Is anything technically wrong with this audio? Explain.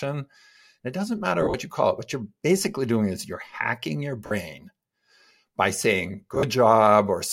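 Yes. Lost LE Audio frames occur at 1.42–1.54 s, 4.26–4.31 s and 6.35–6.43 s, with 80, 50 and 60 ms missing. The first and last losses are scattered, with runs around 40 ms. The LC3 decoder repeats the last spectrum with random signs, smearing the speech into brief noisy hiss.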